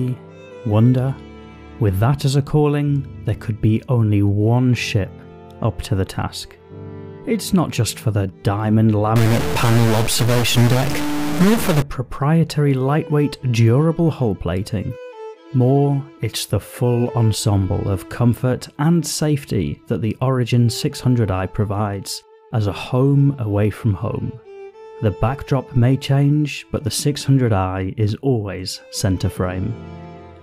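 From 9.16 to 11.82 s the audio turns harsh and buzzy over a loud noise bed, likely a stuck bit shifting samples by about -15 dBFS.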